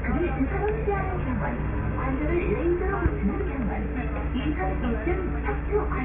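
No technical faults are audible.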